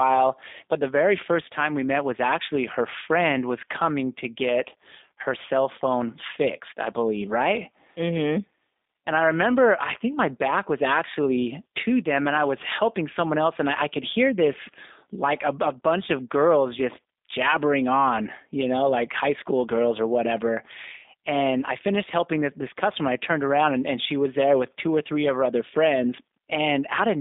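From start to end the speech carries G.729 codec damage: nothing above 3.8 kHz, a line band of roughly 250 Hz to 3.7 kHz, and a plainly rough, synthetic texture. The voice is rebuilt from a filter and sparse pulses, which fits G.729A at 8 kbit/s.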